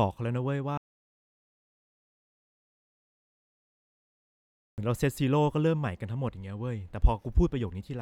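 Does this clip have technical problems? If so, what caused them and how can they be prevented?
Yes. An audio dropout to silence runs from 0.78 to 4.78 s. The speech cuts off mid-flow into 4 seconds of digital silence with no room tone, likely because the input was lost while the recorder kept writing silence. Securing connections and monitoring input levels during recording prevents this.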